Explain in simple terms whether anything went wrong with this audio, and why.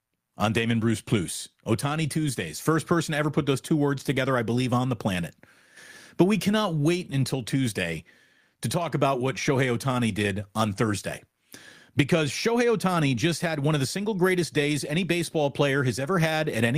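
Nothing went wrong here: the speech comes through steady and intact, with no technical faults at any point.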